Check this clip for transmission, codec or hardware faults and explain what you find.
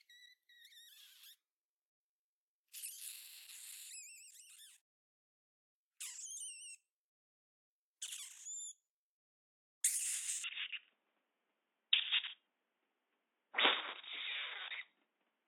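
One fault: from 10.44 s to the end, the audio behaves like an input switched to a poorer device.

At 10.44 s the sound turns dull and narrow with no gap at the change. Everything above 3.8 kHz disappears, the level shifts by about 5 dB, and a faint new background noise, roughly 45 dB below the signal, appears. The likely cause is the system changing to a band-limited input mid-recording. On a spectrogram the upper bands end abruptly at a flat 3.8 kHz ceiling, and the waveform envelope steps in height at that moment.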